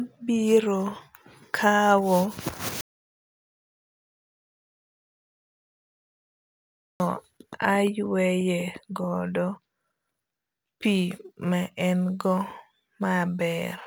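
From 10.27 s to the end at 13.87 s, the speech picks up crude rate conversion. It sounds like samples were simply dropped to the nearest neighbour, which fits a 48 kHz to 44.1 kHz change. That leaves a gritty, inharmonic fizz riding the louder, brighter syllables, roughly 30 dB down.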